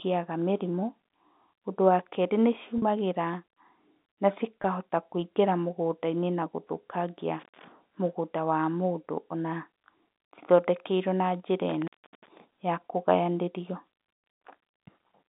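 A brief held, buzzy smear appears at 2.78 s just after "wa kerĩ", about 40 ms long, and again at 4.62 s for 20 ms: packet loss with pitch repetition, where the receiver replays the last pitch period to bridge the missing audio. At 7.40 to 7.65 s, between "na gũthũkangia" and "mũgũnda wa mũndũ ona", the sound drops out for about 140 ms with crackle at both edges. It drops out again at 11.69 to 12.40 s, between "cithondekeirwo na njĩra" and "ya kũgayanĩrio", this time for about 350 ms. Both are intermittent contact from a loose connection opening briefly, and both sit within the narrow telephone band of G.711 coding.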